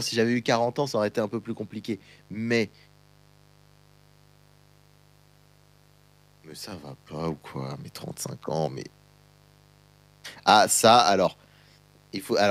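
Mains buzz runs throughout the speech, a steady raspy buzz sitting roughly 35 dB below it. Sharp switching spikes from a dimmer, rectifier or unshielded cable entered the chain twice per 50 Hz cycle, spraying harmonics of 50 Hz up into several kilohertz.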